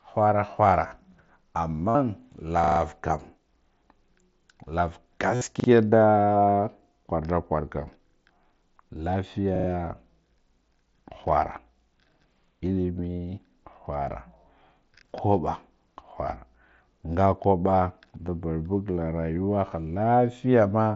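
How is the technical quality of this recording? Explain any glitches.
The speech carries two kinds of dropout glitch, heard through a wideband mSBC headset link whose light graininess on louder syllables and limit near 8 kHz come from the codec itself.

Concealed Bluetooth headset packet loss occurs at 0.88–0.91 s (30 ms), 1.89–1.95 s (52.5 ms), 5.35–5.41 s (60 ms), 18.27 s (15 ms) and 19.36 s (7.5 ms). Packets from the headset never arrived, and the phone filled each gap by continuing the waveform with the closest-matching recent stretch. The single lost packet at 19.36 s is nearly invisible. The longer gaps near 1.9 s and 5.4 s turn into a brief buzzy, held tone at full level, with a slight warble as real audio resumes.

Repeated buffer stutters occur at 2.64–2.80 s, 5.60–5.68 s, 8.08–8.16 s (just after "kwar da kwarkan") and 9.56–9.68 s. Fresh audio came late, so the device replayed the same short block several times, which fits a 40 ms buffer. 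The one at 2.64 s repeats four extra times, the others two or three. What sets these apart from the concealment is the hard, clicky join at each repeat and the identical fragment heard over and over, rather than a smooth, tonal fill. Little or no audio is lost.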